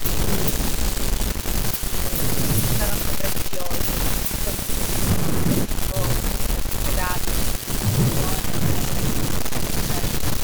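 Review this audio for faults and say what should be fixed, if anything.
Speech suppressed in double talk at 0.81–0.86, 2.79–4.44 and 5.68–7.23 s: the level dips by about 5 dB in patches, likely because the echo canceller ducked during overlapping talk, seen as shallow notches in the waveform envelope. Better double-talk detection in the canceller would prevent this.

Echo leak at 1.34–1.8 and 4.66–10.21 s: a faint copy of the speech about 20 dB down trails by 260 ms, likely loudspeaker echo passing the far-end canceller, visible as a faded, shifted duplicate of the harmonic traces on a spectrogram. Retuning that canceller or using a headset would stop it.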